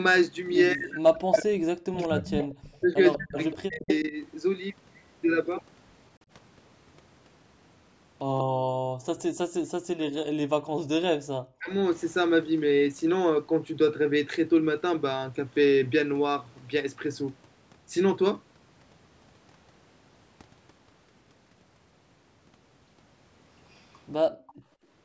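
From 0.73 to 4.14 s the speech keeps dipping and breaking up, about two seconds affected in all, with drops around 40 dB. That's speech suppressed in double talk: with both ends talking, the canceller likely couldn't tell this talker from its own echo and squashed both. Overlapping that, 2.13 to 4.01 s, you get an echo leak, a copy of the voice trailing about 191 ms behind at about 10 dB down, likely residue the far end's canceller didn't remove. It returns, weaker, at 8.38 s (about 15 dB down), 9.2 s and 23.72 to 24.54 s (both about 30 dB down). Right after the 8.38 s leak, 8.48 to 9.06 s, the room sound ducks by up to about 37 dB for roughly 300 ms. That's background gated by the echo canceller clamping the mic while the loudspeaker played. It happens again at 24.31 to 24.79 s, a drop of about 35 dB. Another double-talk dropout of around 40 dB hits 11.05 to 11.73 s.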